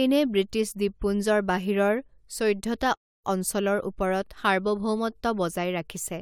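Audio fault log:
2.95–3.25 s, playback stall: just after "দ্বীপপুঞ্জৰ বাহিৰৰ চৈধ্যটা" the speech halts mid-flow and the output goes silent for 278 ms before sound returns. The likely cause is the player running out of buffered data or its thread being blocked, so nothing reached the output until it caught up. This is a single hole about 0.28 s long, far longer than the brief clicks or smeared gaps of a packet-loss dropout.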